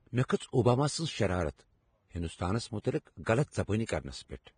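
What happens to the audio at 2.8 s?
Right around 2.82 to 2.84 s there's pre-echo: a short smear of hiss, about 29 ms long, creeps in just ahead of a sharp onset. The codec spreads its quantisation noise across a whole transform block, so noise meant for the loud attack leaks into the quiet gap before it, and the attack itself comes out soft and blurred.

That sits on top of grainy, hissy treble with nothing above 9.7 kHz, heard through the whole clip. It's likely heavy Vorbis compression, consistent with a bitrate around 23 kbps, quantising the top end so coarsely that detail turns to noise.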